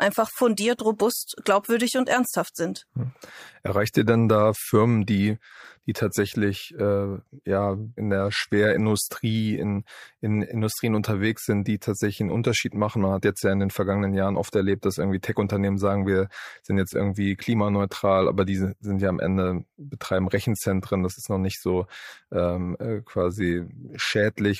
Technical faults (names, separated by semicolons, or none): none